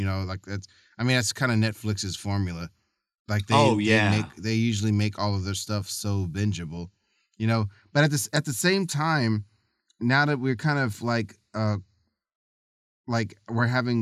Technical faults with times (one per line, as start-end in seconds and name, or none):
none